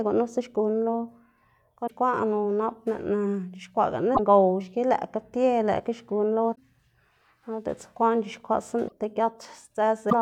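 Damaged data in the compressed stream makes the decoder misread frames and lose sync until it finds the next frame header. Each time, the speech breaks into a brief chirp or blip, at 1.84–1.91, 4.12–4.19, 6.52–6.58, 8.85–8.92 and 10.07–10.13 s.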